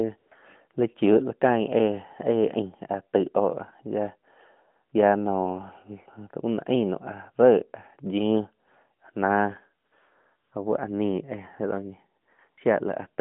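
AMR comfort noise replaces the real background at 0.18–0.32 s, 4.9 s, 9.88–9.92 s, 10.36–10.52 s, 12.22–12.28 s and 12.5–12.58 s: the phone stopped sending speech frames and the receiver synthesised smooth, even noise. Unlike a dropout, these gaps aren't silent; a steady hiss switches in and out.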